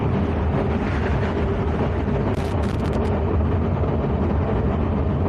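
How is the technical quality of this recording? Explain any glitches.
There's one real glitch here, a burst of loose connector crackle running from about 2.34 to 3.08 s. For roughly three-quarters of a second you get ragged, irregular scratching over the sound. What's going on is a worn or dirty contact somewhere in the cable or jack that keeps making and breaking as it shifts. Each break chops the signal, and any DC sitting on the line turns those breaks into little pops, hence the uneven crackle.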